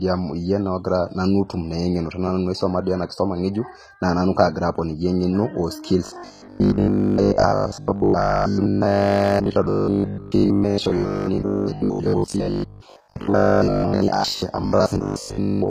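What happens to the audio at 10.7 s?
At 10.7 s the speech is a rigid, metallic buzz pitched at 50 Hz that only loosely tracks the syllables. This robotic sound from repeated short buffers runs from 6.06 s to the end at 15.7 s. The likely cause is audio arriving too seldom, so playback fills the gaps by looping the most recent chunk while the real signal is skipped for most of the stretch. A 50 Hz buzz means each loop lasts 20 ms.

Under that, the treble is gritty and lispy on s sounds, with nothing above 14.9 kHz. The damage is plainly audible and lasts the whole clip. This is likely HE-AAC compression at a low bitrate, around 20 kbps. Only the lower spectrum is coded properly. The upper bands are rebuilt by copying lower ones upward under a coarse envelope, so the harmonics don't line up where the copied treble meets the real signal.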